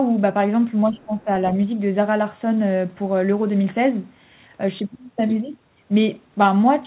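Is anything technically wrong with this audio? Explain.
Yes. There are two faults, both in the same short stretch of this speech.

From 0.89 to 1.28 s, the speech is suppressed in double talk. The level dips by about 10 dB at its deepest. Roughly 300 ms of that window is affected. The likely cause is an echo canceller that heard two people at once. It could not tell the near talker from the loudspeaker echo. So it turned everything down, and the voice briefly sinks.

Inside that dip, from 0.99 to 1.05 s, the other side's voice leaks through. It is a very faint scrap, around 35 dB below the speech. The likely cause is loudspeaker sound reaching the microphone and surviving the echo canceller. It lasts only about 60 ms, so it registers as a faint extra trace under the main voice rather than clear words. The audio has no content above 4 kHz, which fits narrowband telephone coding such as G.711.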